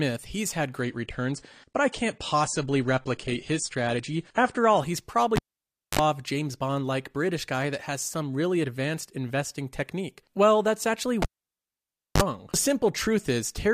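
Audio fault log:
0.80–4.80 s, adaptive stream at a lower bitrate: the speech abruptly loses its treble, with nothing above 10 kHz, and turns smeared and swirly with no break in the sound. The stream likely switched to a leaner version, which fits a drop from about 96 to 32 kbit/s AAC.
5.36–5.99 s and 11.22–12.22 s (the second right after "that's actually"), cable pulled and plugged in: a pop and near silence for 0.58 s, then 0.95 s. Each ends with a roughly 43 ms burst of 50 Hz buzz and a second pop. The buzz comes from mains hum as the plug tip touches before it seats.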